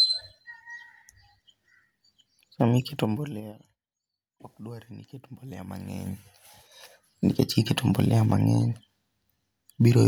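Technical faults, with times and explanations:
2.76–3.58 s and 5.58–6.94 s, zipper noise: the level drops by around 20 dB in the first span and, just after "ni iket", climbs back by about the same amount. Each move is a series of unsmoothed 3 dB jumps, about ten a second going down and about five going up. Every jump leaves a small click, so a ticking rides on the speech. Unlike a faded gain change, the level moves in audible stairs rather than a glide.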